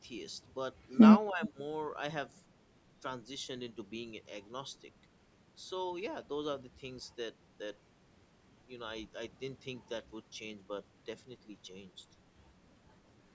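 From 1.3 to 1.59 s, the echo canceller likely could not tell the near talker from loudspeaker echo while both sides spoke, so it turned the speech down along with the echo. This is speech suppressed in double talk: the voice dips by up to about 15 dB in pieces, around a fifth of a second in total. Within that stretch, at 1.45 to 1.49 s, there is an echo leak, likely from a loudspeaker echo canceller letting part of its microphone pickup through. A brief copy of the voice returns 309 ms late, about 20 dB below the speech, as a short, faint scrap. The band stops at 8 kHz, as the call microphone processing leaves it.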